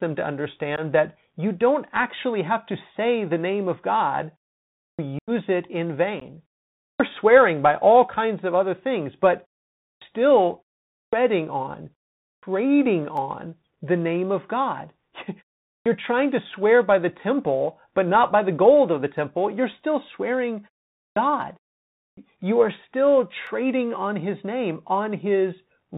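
The whole speech clip passes through the Bluetooth CVSD headset codec, and the damage is plainly audible. CVSD sends one bit per sample at 64 kHz, signalling only whether the waveform steps up or down, with an adaptive step size. The band ends at 4 kHz, so the sound is narrow and muffled. A granular hiss sits under the speech, sibilants turn scratchy, and loud high-frequency content outruns the step size and distorts.

The first unconcealed Bluetooth headset packet loss comes at 0.76 to 0.80 s. About 15 ms of audio vanished between headset and phone and was replaced with silence rather than repaired, leaving a brief hole with abrupt edges.

The first clipped start after a pause follows at 4.78 s. After roughly half a second of silence, about 0.21 s of the next phrase is swallowed while the output device wakes and locks again, so the sound begins abruptly without its onset.

A longer packet loss runs from 5.19 to 5.30 s, just before "it in". 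About 90 ms, roughly ten packets, drops out, enough to chop the speech audibly, and the level comes back briefly lower as the CVSD step size recovers. A short 15 ms gap at 6.20 to 6.23 s, right after "it in", repeats the effect.

Clipped starts recur at 6.78, 9.80, 10.90 and 12.22 s, each after a pause of about 0.3 to 0.4 s. Each costs roughly 0.2 s of onset.

At 13.17 s a dropped samples fault, likely a handful lost from the stream, makes the waveform jump. It is heard as a single sharp click, a thin vertical line across the spectrum, with no speech lost.

More clipped starts occur at 15.64 s, ahead of "trying to swear by", then at 20.94 and 21.97 s. Each again cuts about 0.2 s from the start of the phrase.

A second dropped-samples click lands at 23.47 s.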